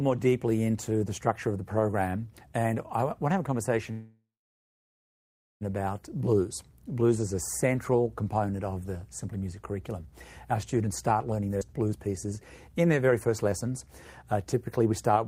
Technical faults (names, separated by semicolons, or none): call audio freeze; jitter buffer speed-up; skip ahead